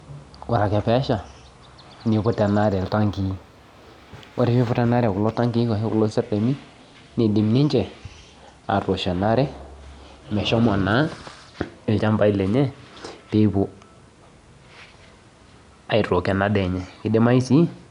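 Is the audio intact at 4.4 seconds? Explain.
No. From 2.65 to 5.34 s there is imaging from linear upsampling. The rate was raised by joining samples with straight lines, which fits a step from 22 kHz to 48 kHz. The top end sounds dulled. A very faint mirrored band between 11 kHz and 22 kHz adds a light metallic shimmer to sibilants.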